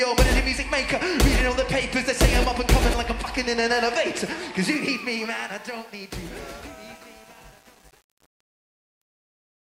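The fade-out beginning around 4.6 s shows truncation distortion on a fade from 4.62 s: the tail turns gritty from 5.04 s onward, consistent with an undithered 8-bit stage.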